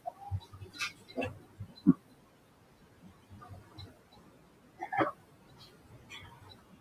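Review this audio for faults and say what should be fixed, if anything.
DC offset runs through the entire recording: the waveform sits shifted off zero by a constant amount. It is inaudible, but it wastes headroom and places steady energy at the very bottom of the spectrum. A DC-blocking high-pass filter at capture would prevent this.

Speech cut by the noise suppressor appears from 0.0 to 4.92 s, with drops of about 19 dB, and from 5.12 s to the end, with drops of about 18 dB over roughly one and a half seconds. Parts of the speech are misread as noise and pulled down, so they sound swallowed. The room noise, about 20 dB below the speech, is mild, so a less aggressive suppression setting would prevent this.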